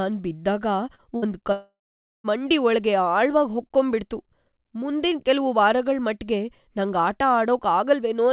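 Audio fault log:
0.95–1.01 s, short concealed packet loss: about 30 ms of speech never reached the decoder in time. The receiver bridged the hole by extending the preceding sound and then blended back into the real signal, leaving a brief smear in the band-limited, sub-4 kHz call audio.
1.16–1.25 s, burst of packet loss: roughly 60 ms of consecutive audio went missing. Concealment continued the last sound while lowering its level, so the gap is heard as a short held buzz or fading hiss. Speech then resumes further on, with the lost portion absent.
1.52–2.27 s, long network dropout: about 0.72 s of speech is gone, likely because no packets arrived during this stretch. The filled-in sound fades out, and about 0.49 s of silence remains before speech returns at "ಮಂಡಿ ಒಳ್ಗೆ" without the missing material.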